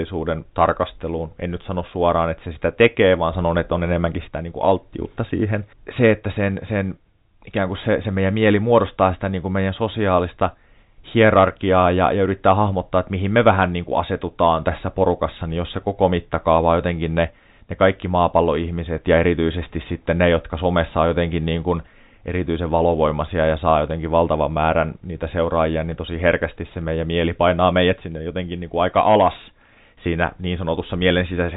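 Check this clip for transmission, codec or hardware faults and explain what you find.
Nothing faulty can be heard in this speech.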